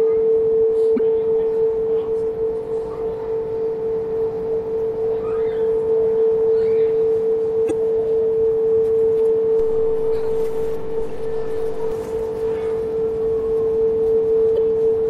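Throughout the clip the audio carries plainly audible coding damage: a watery, swirling quality, with high-frequency detail flickering in and out and a dull top end where the treble stops abruptly. Sharp attacks are smeared. The likely cause is MP3 compression at a low bitrate, which fits something around 64 kbps. At that rate the encoder runs short of bits, so it drops weak frequency lines from frame to frame and cuts off the highest band entirely.

From 0.96 to 1.00 s there is the first of three events of damaged data in a compressed stream. Part of the coded stream was corrupted there. The decoder could not read those frames correctly, lost sync and had to search for the next valid frame header. Each such event lasts about 40 ms and is heard as a brief disturbance in the sound, such as a chirp, squawk, click or short gap, with the audio possibly jumping ahead. The same fault recurs from 7.67 to 7.71 s and again from 14.54 to 14.58 s.

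At 9.60 s a DC step occurs. The waveform's zero line suddenly shifts to an offset, as happens when a converter recalibrates or an input with an offset is switched in. The offset stretch lasts until 11.92 s. The step is heard as a low thump or click, while the audio itself carries on unchanged through the offset stretch.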